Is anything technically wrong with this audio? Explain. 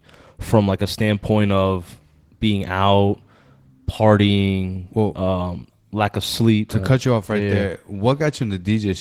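Yes. Throughout the clip the speech sounds slightly hoarse and robotic, with plainly audible Opus voice compression and nothing above 18.8 kHz. Its low-band SILK coder quantises the excitation coarsely, with a CELT layer above 8 kHz, which fits a bitrate around 16 kbps.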